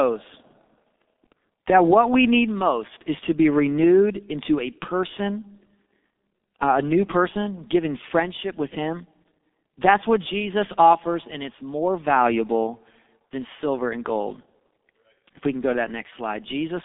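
Speech through the G.723.1 codec throughout, muffled and hoarse with smeared consonants. The spectrogram shows energy confined to about 250 Hz–3.6 kHz, blank above 3.7 kHz, consistent with roughly 6 kbit/s coding.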